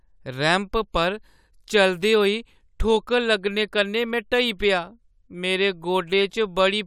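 No technical faults are audible anywhere in this recording.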